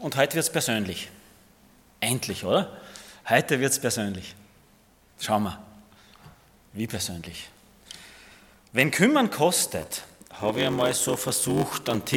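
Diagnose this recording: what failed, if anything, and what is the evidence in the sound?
A block size mismatch (padded) at the driver or buffer stage begins at 9.66 s and runs to the end. A 93.8 Hz buzz appears and the sound slows to 0.861 times its speed with its timbre unchanged. This fits a 512-sample read partly filled by shorter writes, so the waveform shows periodic gaps and the spectrogram shows vertical stripes.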